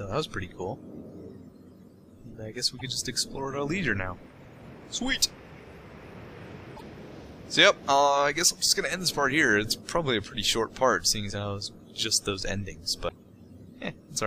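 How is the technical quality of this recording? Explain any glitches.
The recording has three short glitches from damaged data in a compressed stream, at 2.79 to 2.81 s, 6.73 to 6.82 s, and 13.05 to 13.12 s. Each is a brief chirp, squawk, click or short hole that breaks the flow of the sound. Part of the encoded data was corrupted, so the decoder misread those frames and lost sync until it found the next valid frame header. On a spectrogram each event would appear as a narrow vertical smear of broadband or oddly banded energy. On the waveform it would show as a brief disturbance cutting abruptly into the surrounding signal.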